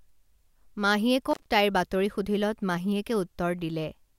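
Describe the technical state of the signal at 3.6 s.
At 3.6 s the speech signal is intact, with no audible fault at that moment.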